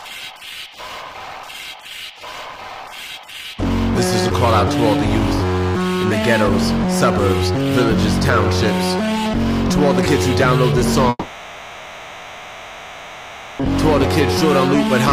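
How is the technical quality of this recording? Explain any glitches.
The recording has one glitch, a long network dropout from 11.09 to 13.61 s. Here the most recent sound is stretched into a buzzy, hissing tail that fades over about 2.5 s, leaving near-silence or a faint steady noise. About 2.5 s of audio is simply missing. When sound returns it picks up further along, with that stretch gone. This is likely caused by the stream stopping entirely, so the receiver had to conceal the gap by extending what it last had.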